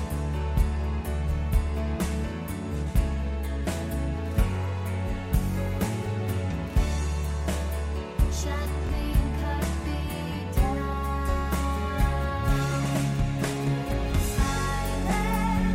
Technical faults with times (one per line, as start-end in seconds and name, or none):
8.87-8.89 Bluetooth stutter